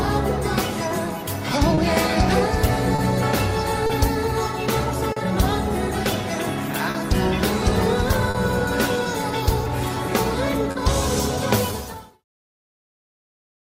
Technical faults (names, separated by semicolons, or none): clock drift between sender and receiver; repeated timing corrections; scattered short gaps; short stall from a late packet